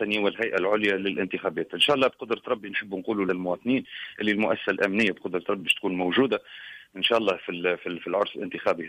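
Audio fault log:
3.28 s and 5.60 s, damaged data in a compressed stream: two brief glitches where corrupted bytes made the decoder misread frames and lose sync until the next frame header.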